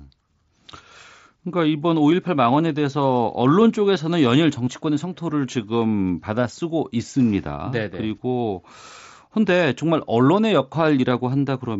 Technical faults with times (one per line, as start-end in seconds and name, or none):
4.65-4.67 concealed Bluetooth headset packet loss